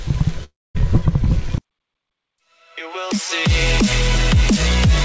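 At 0.44 s there's a call audio freeze lasting until 0.77 s: the sound smears into a fading buzz, then goes silent, and resumes intact, likely from delayed packets starving the jitter buffer.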